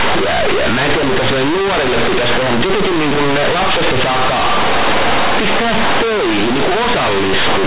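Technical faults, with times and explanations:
Throughout: companded audio read as linear; mu-law bytes played as raw 8-bit samples swing even quiet speech half-scale, giving a blocky waveform and broadband spectrogram noise filling pauses.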